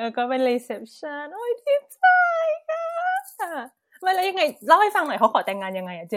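No technical faults can be heard anywhere in the speech recording. There is nothing to place in time or trace to a cause.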